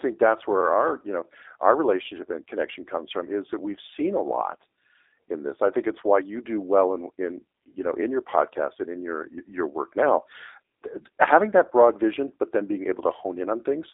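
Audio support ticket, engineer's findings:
G.729 codec artefacts throughout the speech. Band-limited to about 300 Hz to 3.7 kHz, nothing above 3.8 kHz. Plainly audible rough, synthetic texture from speech resynthesised via vocal-tract filter, pitch predictor and sparse pulses per 10 ms frame. Fits an 8 kbit/s G.729A VoIP leg.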